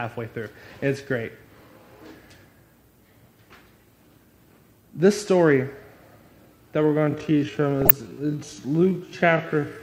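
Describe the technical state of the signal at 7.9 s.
At 7.9 s you're inside a time-stretched section running from 6.83 s to the end. It plays at roughly 0.56 speed, likely software stretching with repeated slices, so it drags with the pitch held steady. On top of that, there's DAB burbling from 7.82 to 7.96 s. Bit errors, around a fifth of a percent, slipped past error correction, and that points to about seven damaged frames with wrong samples, giving brief blips of noise in single sub-bands.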